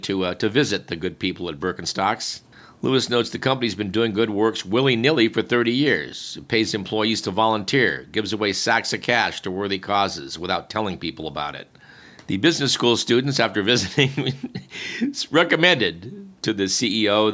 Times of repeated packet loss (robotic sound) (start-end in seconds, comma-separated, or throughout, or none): none